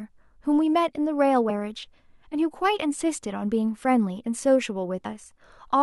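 Damaged data in a compressed stream at 1.49 s and 5.04 s makes the decoder lose frame sync, producing a brief chirp or blip in the speech each time.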